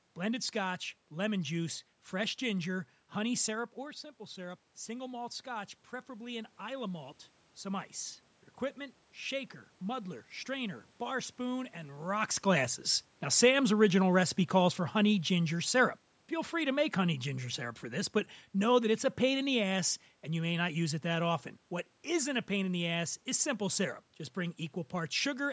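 A speech recording with two automatic gain faults. After the talker moves away from the microphone around 3.5 s and the input drops by about 11 dB, automatic gain rising lifts voice and room noise together by about 5 dB between 3.76 and 7.93 s. On a waveform, the envelope and the noise floor climb slowly in step. After the talker moves again around 12 s, automatic gain falling pulls everything down by about 3 dB from 13.29 to 16.07 s, so the waveform and the spectrogram's background both shrink gradually.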